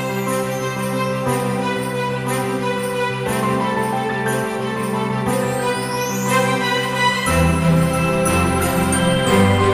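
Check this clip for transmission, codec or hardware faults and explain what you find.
Nothing in the clip stood out as a fault on listening.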